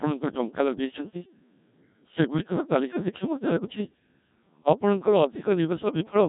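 Throughout, the speech has the robotic buzz of the Codec 2 vocoder, heavily damaged and rebuilt from sine waves, which fits a 1.3 kbit/s mode. Unlike plain band-limiting, which only cuts off everything above 3.8 kHz, the vocoder loses the waveform itself.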